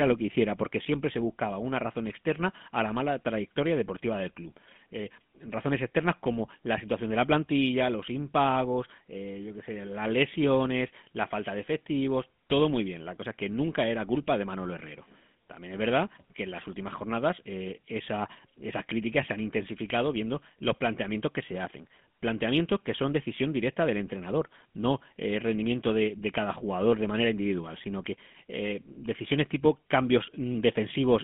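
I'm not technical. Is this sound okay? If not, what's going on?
No. The speech sounds buzzy, gravelly and muffled throughout. That points to the GSM full-rate codec, an old phone-call compression that rebuilds voices roughly and cuts everything above 3.5 kHz.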